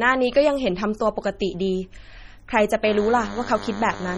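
MP3 compression, likely the cause of the heavy damage throughout, leaves the speech watery and swirly with a dulled top end, fitting a low bitrate near 32 kbps. DECT cordless phone buzz runs from 2.84 s to the end, a thin, harmonic-rich 100 Hz buzz about 15 dB below the speech, from radio bursts every 10 ms rectified by the audio circuit.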